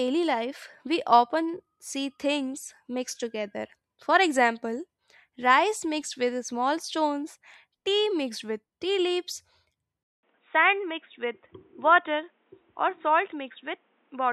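At 10.03 s the input was likely switched to a poorer device: after a 200 ms gap, speech loses everything above 3.8 kHz, sounding boxy over faint new background noise.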